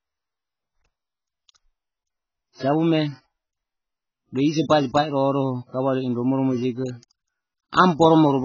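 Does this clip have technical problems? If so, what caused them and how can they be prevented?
Yes. The encoder likely ran AAC compression at a very low bitrate throughout, which fits AAC-LC at around 12 kbps. Nothing survives above 6.8 kHz, so the speech sounds dull, and heavy quantisation smears sibilants into a warbling, fizzy texture. Encoding at a much higher bitrate, or keeping an uncompressed master, would prevent this.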